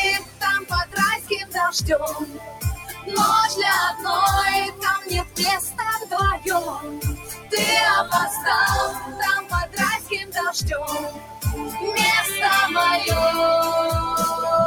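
Throughout the clip a noise suppressor applied to music or sounds, a processor built for speech, keeps treating sustained material as noise. Level swings by around 15 dB as it decides, moment to moment, what to keep. Onsets pass while whatever holds or decays is pulled down, so the sound pumps and thins. Unlike a compressor's pumping, which follows loudness, this follows how steady the sound is. Loud held passages still sink.

The sound cut by the noise suppressor shows as six dips: 0.19–1.56 s (deepest about 15 dB), 2.13–3.13 s (about 11 dB), 4.7–5.39 s (about 14 dB), 5.7–7.53 s (about 13 dB), 8.93–10.37 s (about 13 dB) and 11.1–11.77 s (about 12 dB). Within each span, roughly half a second to a second is actually attenuated. Tails shorten and sustains sag rather than vanishing outright, which separates this from a dropout or mute.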